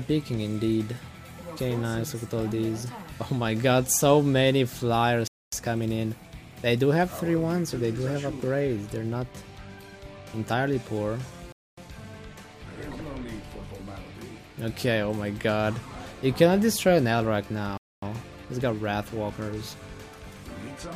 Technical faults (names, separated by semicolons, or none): gap between chunks